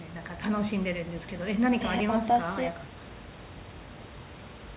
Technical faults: none

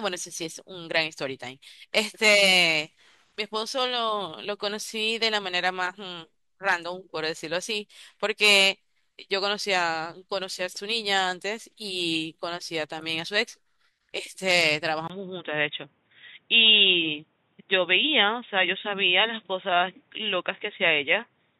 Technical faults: input switched to a poorer device

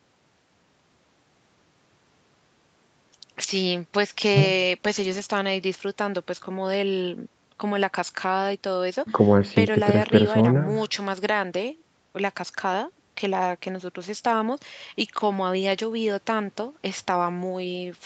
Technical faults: none

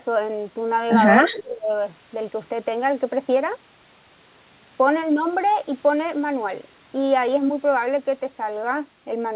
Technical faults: speech suppressed in double talk

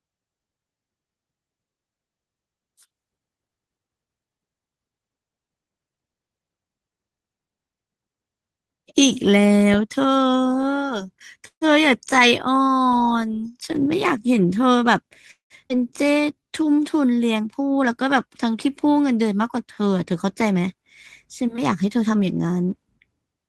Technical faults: call audio freeze; jitter buffer speed-up; skip ahead; jitter buffer slow-down

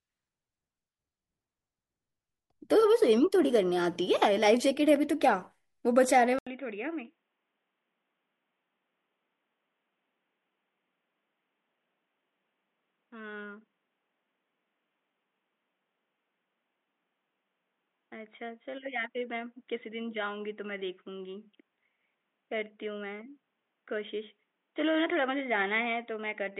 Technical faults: input switched to a poorer device

